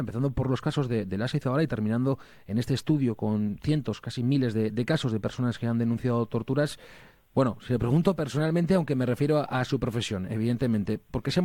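No technical faults are audible.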